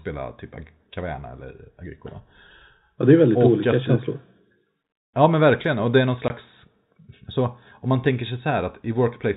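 At 6.28 to 6.30 s, just after "det är någon", the speech drops out completely for 20 ms, a brief hole with abrupt edges. This is packet loss filled with silence: audio packets never arrived, and the receiver played zeros in their place. The gap length fits two lost 10 ms packets. Throughout, the band stops at 4 kHz, as expected from G.711 telephone coding.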